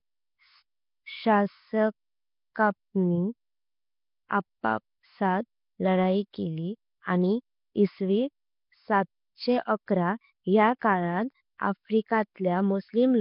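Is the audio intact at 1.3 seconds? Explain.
No. At 1.3 s the speech carries Nellymoser compression, which runs through the whole clip rather than starting there. The likely cause is Flash's old Nellymoser Asao microphone codec: it codes short blocks at a fixed two bits per sample, gives weak bands no bits and fills them with noise. That leaves a rough, hissy halo and a smeared, underwater quality. The damage here is heavy, there is nothing above 5.3 kHz, and the sound fits a rate near 22 kbps.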